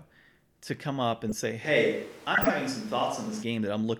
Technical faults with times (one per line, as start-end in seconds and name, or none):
1.29-1.32 corrupt frame decoded
1.65-3.42 switch to a distant microphone
2.35-2.50 corrupt frame decoded